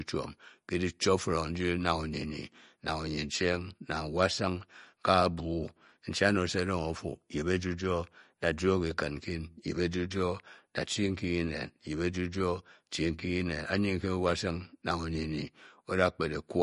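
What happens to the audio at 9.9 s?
At 9.9 s the speech has a watery, swirly quality with smeared attacks, present throughout the clip, likely MP3 compression at a low bitrate around 46 kbps. Starved of bits, the encoder drops weak frequency lines, which blink on and off between frames. A spectrogram shows a hard ceiling at 10.6 kHz and flickering gaps below it.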